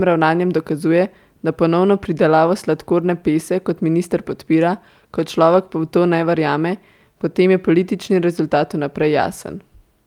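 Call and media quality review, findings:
No audible faults found in this speech recording; nothing to raise against any component.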